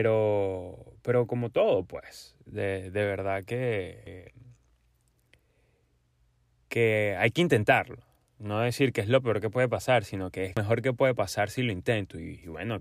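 Speech with damaged data in a compressed stream at 4.07 s and 10.57 s, the second right after "pasar sino que es". At each point the decoder misreads corrupted frames, loses sync and hunts for the next valid header, producing a brief chirp or blip.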